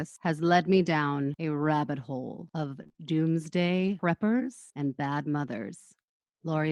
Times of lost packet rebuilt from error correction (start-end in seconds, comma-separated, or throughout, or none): 1.61-1.63, 3.80-3.94